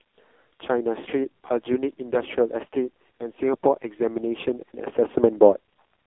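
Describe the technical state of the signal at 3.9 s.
At 3.9 s the speech is still going through an AMR narrowband mobile codec, as it does for the whole clip. The heavy damage fits a low AMR-NB mode, around 5 kbps. This leaves a buzzy, synthetic voice confined to 250 Hz–3.5 kHz, with nothing above 3.6 kHz.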